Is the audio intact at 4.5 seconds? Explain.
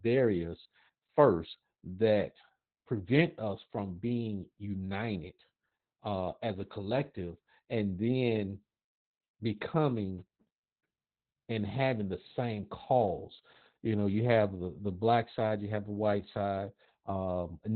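No, Opus voice compression affects 4.5 s and the whole clip: SILK-coded narrowband speech, cut off near 4 kHz at what sounds like about 8 kbps, sounds muffled, hoarse and robotic.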